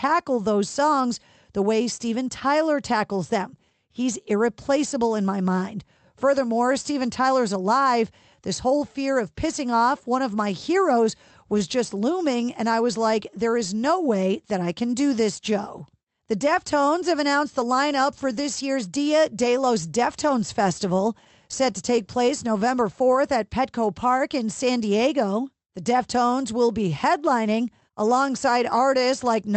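Speech, carried over an Opus call path whose spectrogram shows content stopping at about 8 kHz, with clock drift between sender and receiver: the sender's clock runs about 4% slow, so the receiver's jitter buffer keeps running low and must be topped up to hold its steady playback rate. These top-ups appear as repeated timing corrections from 0.10 s to 29.52 s, where the receiver repeatedly duplicates short pieces, together adding roughly a second and leaving the speech at about 97% speed, with a subtly uneven tempo. On a waveform, short stretches appear twice in a row. On a spectrogram, the same short patterns recur back to back, with small vertical seams at irregular spacing.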